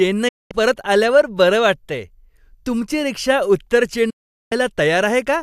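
A digital broadcast dropout occurs twice: the receiver loses valid frames and mutes after a quick 8 ms fade. The speech vanishes from 0.28 to 0.51 s, resuming at "परत आल्यावर", then from 4.10 to 4.52 s; those stretches are simply gone.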